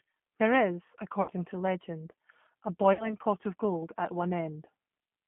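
Speech coded through the G.729 codec, whose rough, slightly synthetic texture fits an 8 kbit/s G.729A stream and is plainly audible throughout. On a spectrogram the energy sits in a band from about 150 Hz to 3.4 kHz, with nothing above it, and harmonics look smeared from frame to frame. There is also VoIP packet loss concealed by the speech codec at 1.22 to 1.30 s and again at 2.93 to 3.15 s. Each gap is about 60 ms, which fits two lost packets. The decoder fills each gap by extrapolating from its last pitch and filter, so the speech is stretched into a sound that fades. The waveform shows the stretched signal shrinking in amplitude, and the second event stays weak well after the loss ends.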